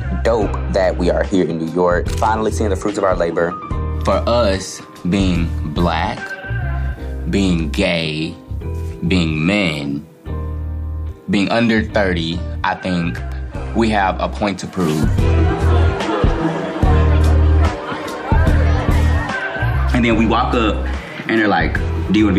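An electrical switching spike lands at 13.32 s as a sharp snap, a couple of milliseconds long and peaking around -20 dBFS, sitting on top of the sound rather than interrupting it. The cause is likely a nearby switch, relay or static discharge arcing briefly, with the audio cabling picking up that burst of interference. Its extremely short duration and hard edge give it the dry, crackling character of electrical pickup.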